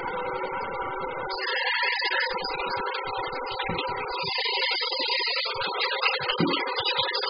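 Throughout, nothing is heard above 5 kHz. The sound is dull, smeared and warbling. Likely cause: heavy AAC compression at a very low bitrate.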